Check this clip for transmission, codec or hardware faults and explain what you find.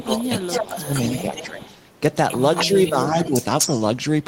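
Two faults show up in this speech clip, both typical of a hands-free call.

Speech suppressed in double talk occurs at 0.0–0.22 s, 0.4–0.8 s, 1.22–1.62 s and 2.67–3.31 s. The voice dips while the far side talks. The dips reach roughly 15 dB at the deepest. The likely cause is an echo canceller that mistook overlapping talk for echo and attenuated both.

Echo leak appears at 0.0–1.47 s, 1.63–1.78 s, 2.29–3.03 s and 3.21–3.83 s. A copy of the voice returns about 246 ms late. It ranges from roughly 25 dB below the speech to about equal level, reaching equal level by the end. This likely comes from a loudspeaker echo the canceller failed to remove.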